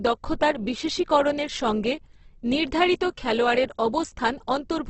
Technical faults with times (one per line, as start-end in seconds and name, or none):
0.00-4.89 Opus compression